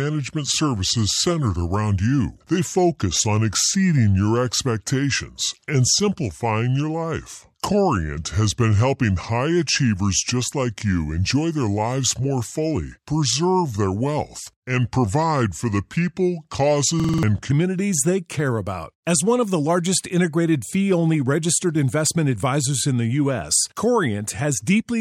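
From 0 to 17.5 s the speech runs at 0.8 times its recorded speed, a section at the wrong speed: pitch drops by roughly four semitones and delivery drags, with speed and pitch shifted together. The likely cause is playback or editing against the wrong clock.

Between 17.00 and 17.23 s a system hang loop repeats one 46.4 ms fragment five times, a stutter at 21.5 Hz, consistent with a 2048-sample buffer cycling while the system froze. Around 200 ms of audio is lost.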